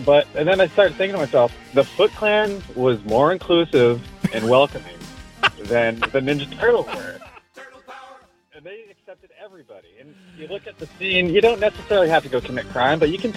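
Zipper noise appears at 7.08 to 7.56 s and 10.2 to 11.2 s. The level falls, then rises, roughly 25 dB in unsmoothed steps of about 3 dB. Each step ticks audibly.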